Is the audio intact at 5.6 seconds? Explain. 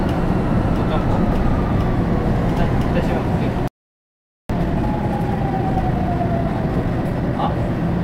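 No, 5.6 s falls inside a time-compressed catch-up running from about 4.5 to 7.5 s. After a stall, the player trims its backlog by snipping out small pieces and cross-fading the joins, so the sound hurries along at roughly 1.25 times speed with normal pitch.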